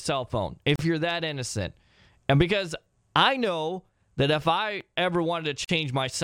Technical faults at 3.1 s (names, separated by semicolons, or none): none